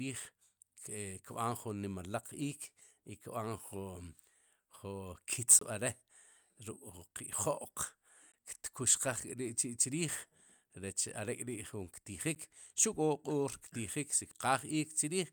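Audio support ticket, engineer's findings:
Block of digital silence at 5.59–5.61 s (about 23 ms, which fits a 1024-sample buffer), 8.32 s (17 ms) and 12.35 s (10 ms). Each is heard as a tick or short hole in the speech. On the waveform it is a flat line with hard edges. On the spectrogram it is a blank vertical gap. The output buffer was probably not filled in time.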